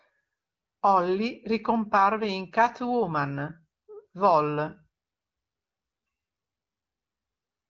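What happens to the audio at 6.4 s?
Nothing goes wrong at 6.4 s; the speech passes through intact at that point, carried by the AMR wideband (HD Voice) codec at 15.85 kbit/s with only light coding colouration and no content above about 7.5 kHz.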